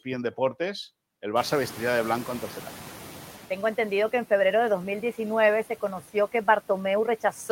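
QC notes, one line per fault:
1.36–3.48 s, noise suppressor catching up: room noise jumps by about 25 dB near 1.5 s and the suppressor's noise estimate lags, so noise passes with less reduction at first, then sinks about 7 dB over 2.12 s. Spectrogram shows a bright noise floor fading gradually, and the waveform baseline visibly shrinks.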